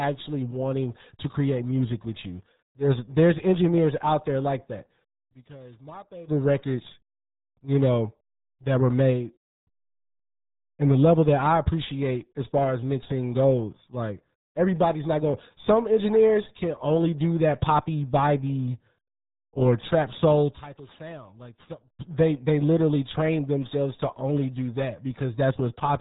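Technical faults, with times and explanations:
Throughout, RealAudio 14.4 codec: heavy low-bitrate coding around 8 kbit/s leaves the speech muffled and gargly, with nothing getting through above about 3.8 kHz.
19.92 to 22.12 s, loudspeaker feedback squeal: a 4.3 kHz tone swells up over under a second to about 5 dB above the speech, mic hearing its own speaker, then drops before "they literally train themselves".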